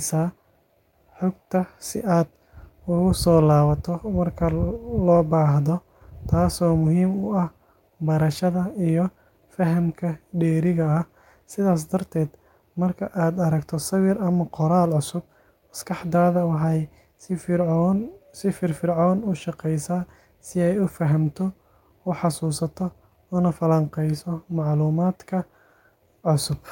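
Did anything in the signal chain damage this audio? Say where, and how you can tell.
No, nothing along the chain left a mark on this speech recording that I can hear, so there's no damaged stage to point to.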